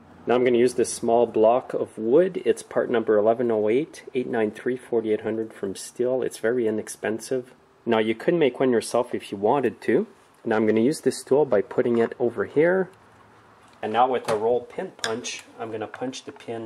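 No technical faults are audible.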